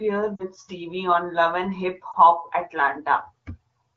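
Speech over an AMR wideband (HD Voice) link, with light codec damage, breaks twice from lost AMR speech frames: 0.35–0.44 s, with about 40 ms of audio concealed, consistent with two dropped 20 ms frames, and 2.12–2.16 s, consistent with one frame. The decoder bridges each gap by repeating the last good pitch and vocal tract settings at falling gain. The result is a brief smeared warble and dip, then a weak restart. On a spectrogram, harmonics flatten into a frozen, fading band. The waveform shows a short amplitude sag.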